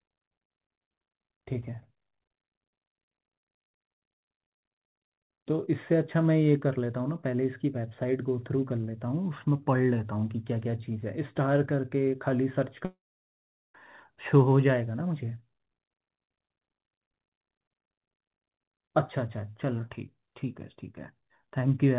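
From 12.85 to 13.75 s, a likely long network dropout: a short fading buzz, then about 0.77 s of silence. Unlike brief concealment, 0.89 s of sound is simply gone.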